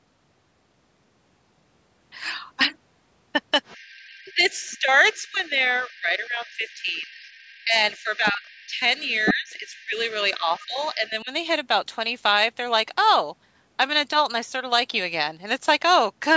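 From 3.65 to 4.79 s, a faint second voice sits under the speech, about 25 dB down. This is the other side's voice leaking through. It is likely loudspeaker echo that the echo canceller left in the microphone signal. It returns at 5.13 to 5.49 s and 5.83 to 7.64 s at the same faint level.

From 4.23 to 7.09 s, the main speech dips by up to about 20 dB, for around 2 s in total. This is speech suppressed in double talk. With both sides talking, the canceller likely mistook the talker for echo and turned everything down.

The second suppression runs from 7.64 to 11.31 s. It is deeper, about 25 dB at worst, for roughly 3 s in total. The leakage grows here too. It is about 15 dB down at 7.97 to 8.68 s and only about 5 dB down at 8.99 to 10.14 s, nearly matching the talker. A last faint scrap comes at 10.56 to 10.88 s.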